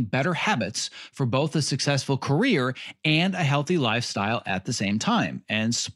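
Speech, with no technical faults to be heard.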